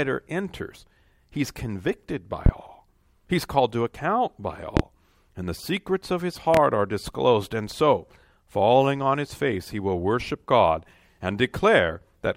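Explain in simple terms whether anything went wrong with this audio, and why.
Three loud pops cut through the speech, at 2.46 to 2.50 s, 4.77 to 4.81 s and 6.54 to 6.58 s. Each is a single sharp crack, far louder than the talking, which carries on underneath. A sudden electrical jolt, likely from a plug, switch or static, caused them.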